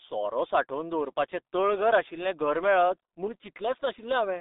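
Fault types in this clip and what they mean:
G.723.1 codec: heavy low-rate telephony coding, which fits about 6.3 kbit/s, removed everything above 3.8 kHz, leaving the speech muffled and hoarse with smeared consonants.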